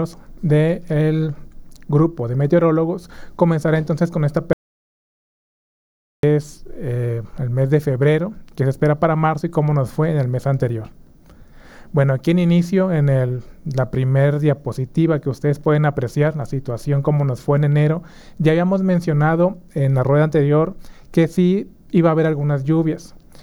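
From 4.53 s to 6.23 s the audio drops out to silence for about 1.7 s. The sound stops abruptly mid-flow and resumes just as abruptly. The gap is silent, with no room tone or noise floor underneath, so the signal chain was still writing samples but receiving nothing. The likely cause is a momentary loss of the input, such as a disconnect, link failure or mute. Whatever occurred during that interval is not recoverable.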